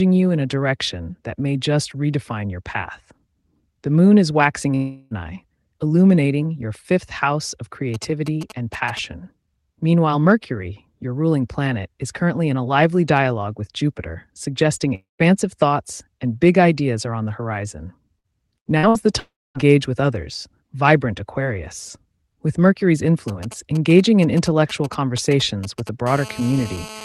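At 4.75 s the speech cuts out for about 0.36 s, most likely a long network dropout. The receiver keeps stretching the last sound into a fading buzz or hiss right up to 5.14 s, and then the speech jumps forward with that stretch gone.

From 7.94 to 8.99 s there's a galloping dit-dit-dit of short raspy 217 Hz buzzes, sitting around 15 dB under the speech. That's GSM signalling bursts: a nearby 2G phone pinging the network, with its radio pulses rectified by the audio circuitry.

A second likely dropout runs from 14.95 to 15.22 s. This time the concealment buzz or hiss dies away into roughly 0.14 s of silence before the audio picks up again further along.

Around 18 s there's a cluster of packet-loss bursts at 18.19, 18.78 and 18.89 s, each about 60 ms long. You hear each one as a brief held buzz or fading hiss followed by a small skip, because the receiver smears the last sound across the missing packets.

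Right after those, from 19.20 to 19.70 s, comes the longest dropout, again likely a network dropout. The fill fades out and leaves about 0.25 s of dead air before the speech resumes.

The GSM signalling bursts come back from 23.28 to 25.89 s with the same galloping short buzzes, again around 15 dB down.

From 26.07 s to the end, that switches to a steady GSM phone buzz. It's a hard, harmonic-rich 217 Hz rasp about 17 dB below the speech, the pattern you get once the phone is actually on a call and transmitting in bursts 217 times a second.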